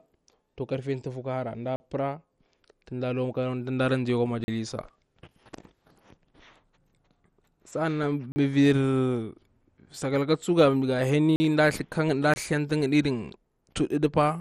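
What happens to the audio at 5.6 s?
At 5.6 s, as throughout the speech, MP2 compression is likely the cause of plainly audible damage: the 32 sub-bands get too few bits, consistent with about 64 kbps. Nothing remains above 14.3 kHz, and coarse quantisation leaves a dull, gurgling, granular texture.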